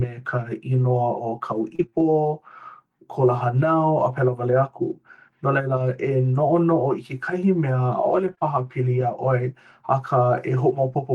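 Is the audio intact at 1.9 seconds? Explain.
No. From 1.75 to 1.99 s the speech suffers repeated packet loss (robotic sound). Three gaps open in quick succession, the longest 30 ms, with about 80 ms missing altogether. Each hole is papered over by stretching the last received sound, and roughly 40 ms ends up rebuilt this way, with about 36% of the span concealed. The result is a choppy stutter with pieces missing, rather than the single clean hole of one isolated dropout.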